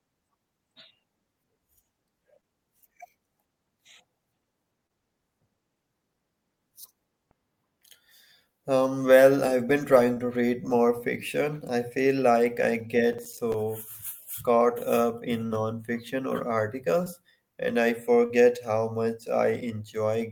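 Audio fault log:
2.41–2.45, 4.87–4.91, 10.13–10.19, 17.04–17.08, 18.26–18.32 s, short concealed packet loss: gaps of 20 or 40 ms, fitting one or two lost 20 ms packets, are bridged by extending the preceding speech, giving a brief smear.
13.13–13.54 s, processor overload crackle: around ten roughly 5 ms buffers miss their deadline and drop to silence, leaving hard-edged gaps heard as gritty crackle; the waveform shows flat notches, and the spectrogram shows vertical broadband clicks.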